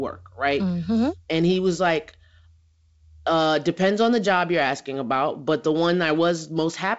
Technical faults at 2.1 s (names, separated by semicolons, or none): none